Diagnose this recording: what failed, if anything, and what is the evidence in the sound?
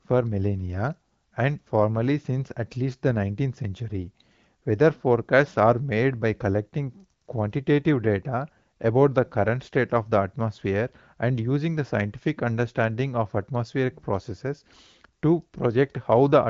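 No fault found in this recording.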